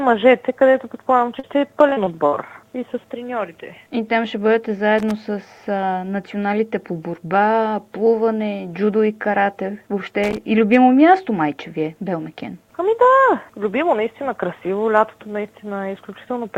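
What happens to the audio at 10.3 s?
A loose connector crackle breaks out from 10.24 to 10.37 s. A worn or dirty contact is making and breaking rapidly, chopping the signal on and off for about 0.13 s. The result is a short, irregular burst of scratchy crackle over the sound.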